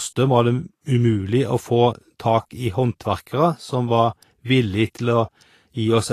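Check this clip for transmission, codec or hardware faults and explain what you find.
One codec fault runs through the whole clip. The speech carries Vorbis compression damage from start to finish, and it is plainly audible. Nothing is present above about 14.2 kHz. The likely cause is a low-quality Vorbis encode, which fits a rate near 34 kbps. At that setting the encoder trims the top band and codes the remaining treble coarsely. Fine detail is swapped for noise of similar energy. The result is a hissy, grainy texture, with tones roughened and attacks blurred.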